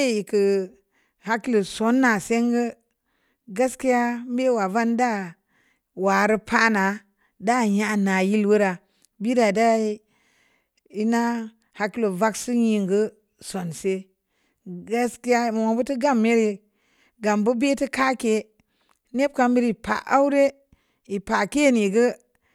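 No technical faults can be heard in this speech recording.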